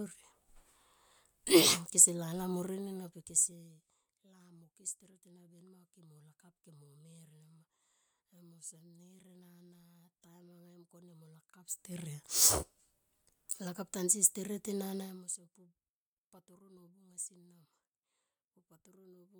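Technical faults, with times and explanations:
No technical faults, so there are no times or explanations to give.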